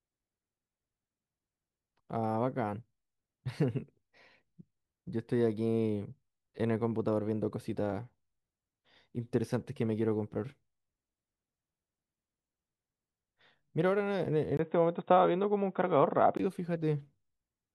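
At 14.57 s there's a tiny gap, about 20 ms, and then the speech suddenly turns dull and boxy, with nothing above 3.8 kHz. A faint new noise floor comes in well below the speech, while the loudness stays about the same. At 16.39 s the full bandwidth comes back. That pattern points to the input likely switching to a poorer device for those couple of seconds, such as another microphone or a headset's narrowband call profile.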